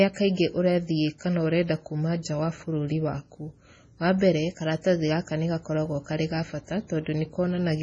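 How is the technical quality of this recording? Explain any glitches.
The technical quality is poor, with heavy compression damage throughout and one pre-echo glitch.

The whole recording shows heavy MP3 compression damage, likely from low-bitrate MP3 encoding, around 24 kbps. Nothing survives above 10.3 kHz. Starved of bits, the encoder drops weak frequency lines frame by frame. The speech sounds watery and swirly, with smeared attacks.

A pre-echo occurs from 2.23 to 2.25 s, just before "wa bũrũri waku". Quantisation noise meant for a loud attack spreads across its whole block, reaching about 21 ms early. A brief hiss precedes the onset, which sounds soft and smeared.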